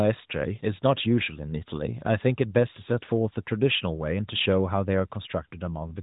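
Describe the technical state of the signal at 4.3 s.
At 4.3 s the signal is intact, with no fault there; the speech comes through the AMR narrowband mobile codec path as it does throughout, with nothing heard above about 3.8 kHz.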